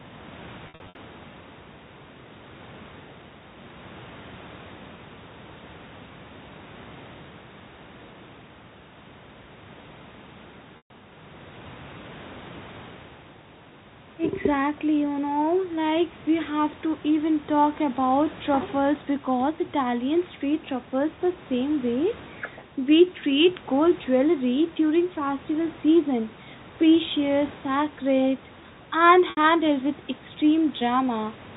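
Short held, buzzy stretches break into the speech at 0.67 to 0.95 s (about 200 ms missing, in runs up to 60 ms), at 10.77 to 10.90 s, and at 29.30 to 29.37 s after "season precious sacred and". This is packet loss with pitch repetition: the receiver filled each gap by repeating the last pitch period.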